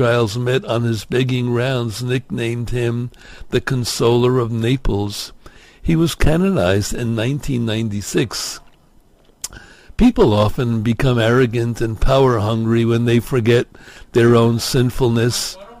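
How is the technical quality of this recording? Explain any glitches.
The recording has one flaw running through its whole length: crude rate conversion. Throughout, a gritty, inharmonic fizz rides on loud and high passages. It fits a 48 kHz to 44.1 kHz change made by simply dropping samples with no filter. The resulting error, roughly 30 dB below the signal, forms shifted, inharmonic copies of the audio. Unlike codec artefacts, it doesn't swirl or smear. It tracks level and brightness in a fixed, repeating pattern.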